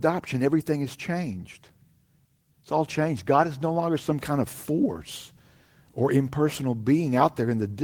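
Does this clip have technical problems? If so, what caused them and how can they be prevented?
No, there are no technical problems in this recording.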